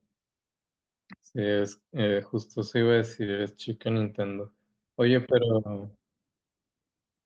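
At 3.25 to 3.29 s, short concealed packet loss: about 20 ms of the Opus call audio arrived too late and was replaced with an extrapolated continuation. Unlike a silent dropout, it sounds like a brief smear instead of a gap.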